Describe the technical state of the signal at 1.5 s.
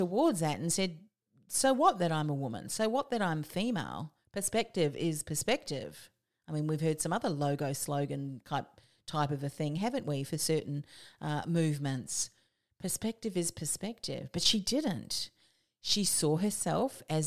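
At 1.5 s the speech signal is intact, with no audible dropout, distortion, glitch or other fault.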